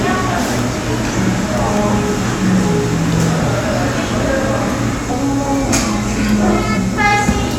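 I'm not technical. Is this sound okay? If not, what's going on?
No. At about 6.76 s the sound jumps forward, losing roughly a fifth of a second. These are compressed frames skipped: about ten frames of the compressed file, each 23.2 ms, never play. Unlike a dropout there's no silent gap, and the join is a soft smeared blip rather than a sharp click.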